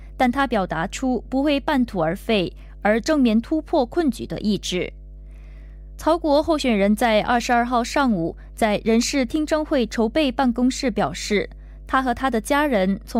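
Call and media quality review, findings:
Mains hum, full clip: steady 50 Hz tone with low harmonics, roughly 20 dB under the speech. Probable ground loop or nearby transformer in the capture chain. Unlike rumble or wind, it is pitched, fixed in frequency and level, and persists between phrases.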